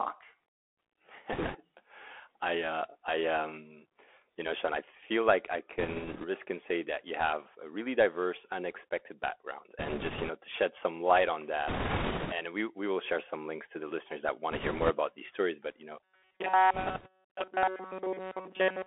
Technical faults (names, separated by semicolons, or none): Bluetooth CVSD headset codec; bit errors on a Bluetooth voice link; robotic sound from repeated short buffers